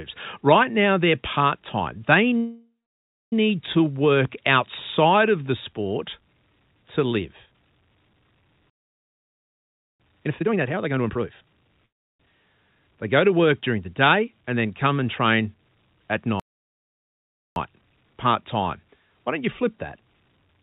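At 2.37 s a call audio freeze begins and lasts until 3.33 s. The likely cause is delayed packets draining the jitter buffer. The last sound is stretched into a brief fading buzz, then about 0.6 s of silence, before the speech resumes on "to work outside of" with nothing lost. Roughly 0.95 s of delay has been inserted. What marks it as a freeze rather than a stall is that smeared, decaying tail before the quiet.

From 8.70 to 10.00 s comes a playback stall of about 1.3 s, likely the player running short of data or being blocked. Here the sound simply cuts off mid-flow into silence, with no buzz or fade, and then carries on.

Straight after, from 10.26 to 11.83 s, a jitter buffer speed-up plays the speech at about 146% of normal rate. Roughly 0.7 s of material is trimmed out in many tiny pitch-period pieces to work off a backlog, so the speech sounds rushed while its pitch stays unchanged. 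Unlike a tape-style speed-up, it does not get higher.

A second call audio freeze, likely from another packet delay, runs from 11.86 to 12.21 s. It adds about 0.34 s, almost all of it near-silent after a very short decaying carry-over.

Between "come and train at" and "part time", from 16.40 to 17.56 s, a second playback stall, likely with the same cause, leaves a clean gap of about 1.16 s.

Finally, from 20.57 s to the end, just after "don't you flip that", a brief speed-up runs at about 120%. Throughout, nothing above 4 kHz is present, consistent with a narrowband call codec.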